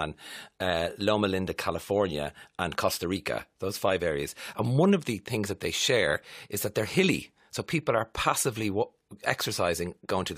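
No technical faults can be heard anywhere in the speech.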